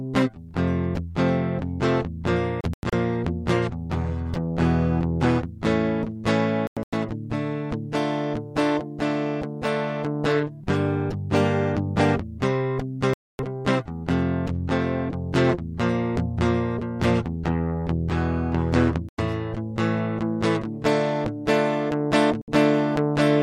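The music cuts out in digital broadcast dropouts at 2.61, 6.67, 13.14, 19.09 and 22.42 s. Each time, the receiver mutes on corrupted frames, leaving silent holes of 64 to 256 ms. The first two break into several short gaps.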